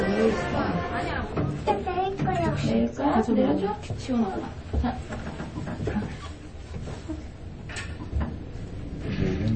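A recording of everyday sound carries MP3 compression damage from start to finish, likely from a low-bitrate encode; the degree of damage fits something around 30 kbps. Nothing is present above 8.4 kHz, so the top octave is missing and the sound is dull and closed-in. At that bit budget the encoder has too few bits for the full spectrum, so it drops the treble at a fixed point and discards weaker frequency components, leaving plainly audible coding artefacts throughout.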